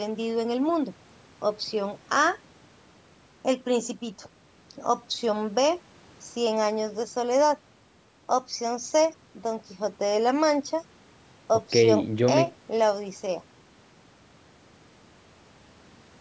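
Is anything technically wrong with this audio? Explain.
No, nothing is technically wrong with this speech.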